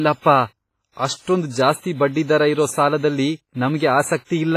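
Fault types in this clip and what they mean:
WMA compression: The speech has a ringing, washy smear and a hiss that swells and fades with the signal, and nothing is present above 15.4 kHz. This heavy damage is likely from a WMA-style transform codec at a rate that points to around 24 kbps. Long blocks spread quantisation noise across tens of milliseconds and drop weak components. A plain low-pass filter would remove the top cleanly, without this breathing wash.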